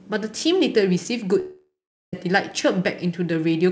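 Speech clip with a gap from 1.40 to 2.13 s: a fading buzz continues the last sound, then about 0.4 s of silence, most likely a long network dropout before audio resumes.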